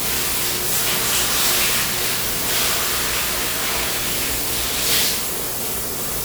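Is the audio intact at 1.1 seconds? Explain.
No. At 1.1 seconds, as throughout the clip, the sound shows generation loss, likely from being decoded and re-encoded with a lossy codec about seven times. The character points to WMA at around 96 kbit/s. Each pass quantised the signal again on a shifted frame grid, so noise and spectral gaps built up. These everyday sounds come out swirly, smeared and hollow, with blurred attacks, though content still reaches 20.1 kHz.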